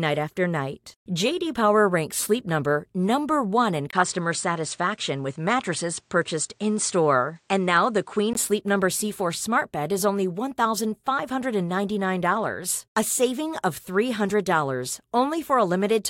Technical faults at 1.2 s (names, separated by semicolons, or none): none